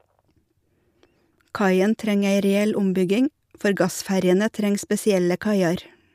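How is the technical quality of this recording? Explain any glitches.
Nothing in this speech recording sounds like a technical glitch, so there's honestly nothing to explain here.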